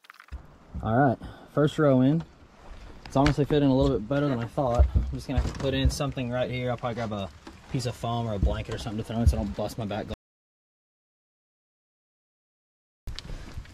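The input feed was likely lost between 10.14 and 13.08 s, through a disconnected device, a failed link or an unintended mute, while the recorder kept writing silence. The result is an audio dropout to silence lasting about 2.94 s: the sound stops abruptly mid-flow and the gap is completely dead, with no room tone or noise floor underneath. Whatever occurred during that stretch is simply missing when the sound resumes.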